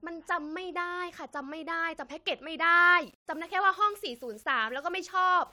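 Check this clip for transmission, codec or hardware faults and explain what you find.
One fault: from 3.03 s to the end, the speech turns grainy, which points to low bit depth without dither, likely rounding to 8 bits. The error sits roughly 35 dB below the signal and follows it, unlike dither's steady hiss, so quiet passages turn gritty.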